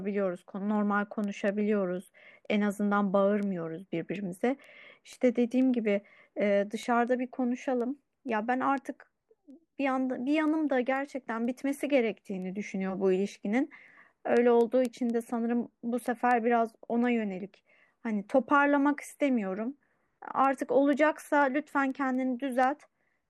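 Speech, with word clock ticks running from 0.27 s to 23.12 s. Sharp ticks of uneven strength recur about every fifth of a second, around a hundred in all. The digital link is being read by a device on its own clock, not locked to the sender. The two clocks drift by roughly 100 ppm. Each time they slip past each other, a few samples are misread and one sample is dropped or repeated. That slip is each tick.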